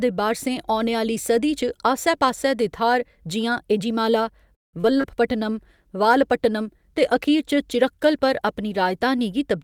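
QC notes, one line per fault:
4.55–5.05 s, repeated packet loss (robotic sound): after "जि'यां एझिमाला" the speech turns choppy, four dropouts patched by stretching the last sound, nearly half the span concealed.
5.32–9.07 s, call bitrate drop: speech turns rough and muffled as the encoder falls from 64 to 23 kbps, coding coarsely and trimming high frequencies.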